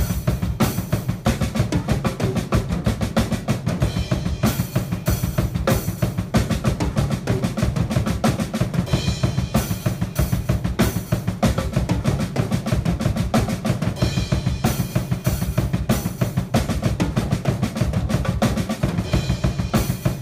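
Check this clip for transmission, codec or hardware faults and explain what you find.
Four isolated clicks point to one fault, dropped samples, at 5.54, 7.39, 16.23 and 19.70 s. Each click is a single sharp tick with a thin vertical line across the spectrum. The likely cause is samples, about 0.7 ms' worth, missing from the stream at each point. The waveform then jumps straight from one value to a later one, and that step discontinuity is what produces the tick. The gaps are far too short to remove any audible sound.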